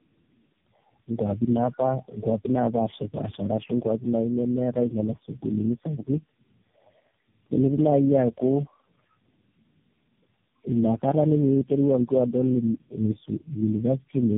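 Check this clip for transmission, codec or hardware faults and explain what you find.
One fault affects the whole clip. The speech sounds rough, muffled and warbly, with nothing above 3.7 kHz. This is tandem speech coding: several low-rate codecs each re-encoded the previous one's degraded output.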